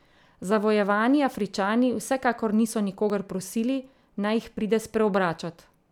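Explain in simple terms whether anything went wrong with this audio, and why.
The recording program likely fell behind, so the hardware overwrote a few milliseconds of sound before it was saved: a dropped buffer (overrun). The edges join directly, giving a jump at 3.10 s, just after "vsekakor niso", and at 4.57 s, after "prosili naj jih".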